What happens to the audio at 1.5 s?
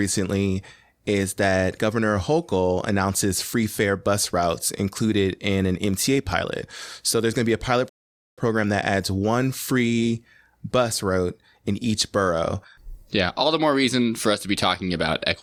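Nothing goes wrong at 1.5 s; the speech plays through that moment intact, with no dropout, click, distortion or other fault to be heard.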